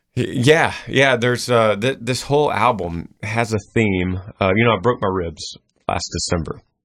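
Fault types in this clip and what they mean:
Adaptive stream at a lower bitrate: The stream switches to a cheaper version of the audio when the connection slows. Here the change lands at 3.53 s, just after "this whole album has", and lasts to the end. There is no gap. The speech suddenly loses its top end, with nothing above 9.3 kHz. Smearing and watery codec artefacts rise. The drop sounds like a move from about 128 kbit/s MP3 to roughly 18 kbit/s.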